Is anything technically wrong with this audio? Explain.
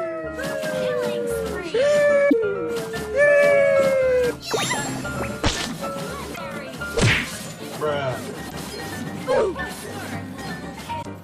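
Yes: four brief glitches break the sound at 2.26–2.33 s, 6.31–6.38 s, 8.45–8.52 s and 10.99–11.05 s. This is damaged data in a compressed stream: corrupted bytes make the decoder misread frames and lose sync for about 70 ms each time.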